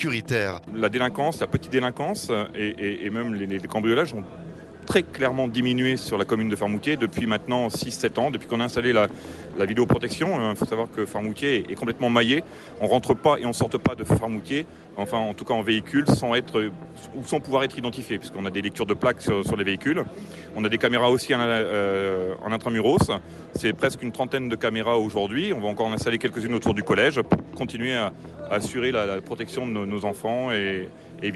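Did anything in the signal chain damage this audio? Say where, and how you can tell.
No, nothing in the chain damaged this audio: it went through a WebRTC call path whose codec limits the top of the spectrum to roughly 12 kHz, which points to Opus at a moderate bitrate, and the signal shows no dropouts, clipping or timing disturbances.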